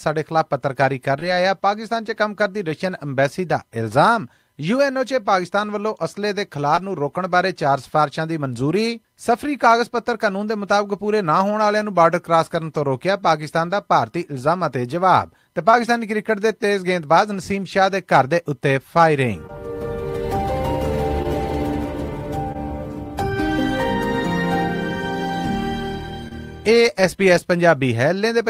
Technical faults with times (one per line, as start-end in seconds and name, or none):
1.19-1.23 short concealed packet loss
6.75-6.79 short concealed packet loss
15.71-15.75 short concealed packet loss
19.47-19.51 short concealed packet loss
21.23-21.26 short concealed packet loss
22.52-22.56 short concealed packet loss
26.28-26.33 short concealed packet loss